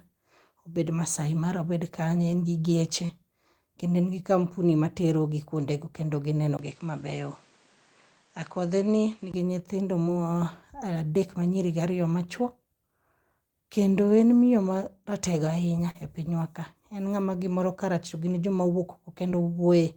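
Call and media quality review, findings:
Short concealed packet loss, 3.05–3.11 s, after "obed kanye en gi": brief smear where about 40 ms of speech arrived too late. Jitter buffer/decoder concealment extended the last sound for about 35 ms, then cross-faded back.

Short concealed packet loss, 10.03–10.07 s: brief smear or wobble. About 20 ms gap, 18 ms of it synthesised from the preceding sound.

Short concealed packet loss, 15.91–15.96 s, just before "e pinywa ka": brief smear. About 40 ms lost, about 37 ms bridged by concealment.

Short concealed packet loss, 19.30–19.44 s: small stretch. 20 ms missing, 11 ms filled, and roughly 15 ms extra inserted as the buffer re-timed playout.

Input switched to a poorer device, 6.57–9.34 s, after "materogi kwondego kendo gineno": 20 ms dropout at the switch, then duller band-limited sound with nothing above 9.3 kHz, level down about 5 dB, new noise floor roughly 30 dB under speech. 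Likely a capture-device or headset-profile change.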